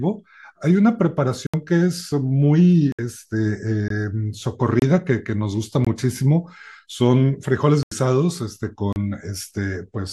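Brief holes break the speech at 1.47, 2.92, 3.88, 4.80, 5.85, 7.83 and 8.93 s. Each is a block of digital silence lasting 21 to 85 ms, where the sound cut out with no fade. Some gaps span 1024 or 4096 samples, which points to output buffers that weren't filled in time.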